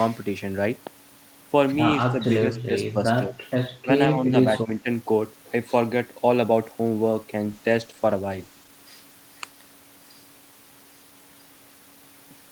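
From 2.12 to 4.87 s the speech dips in short bursts at 2.12, 2.43, 2.93, 3.22, 3.84, 4.09 and 4.64 s, by a few dB up to around 20 dB, likely speech suppressed in double talk as the echo canceller ducked its own talker along with the loudspeaker echo. The waveform shows notched envelopes and the spectrogram shows thinned bands.

From 7.45 to 8.77 s a call bitrate drop makes the speech rough and muffled. For about 1.25 s the upper spectrogram empties and the texture coarsens, which fits the encoder falling from around 32 to 14 kbps before recovering.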